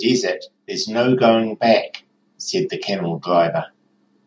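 From 0.66 s to 1.91 s the speech shows automatic gain rising: the level control judged the input too quiet and pushed its gain up by about 5 dB over that stretch. Voice and background noise swell together, so the room seems to creep closer. On a waveform the envelope widens steadily across those 1.25 seconds; a spectrogram brightens uniformly at all frequencies, up to the 8 kHz ceiling set by the call microphone processing.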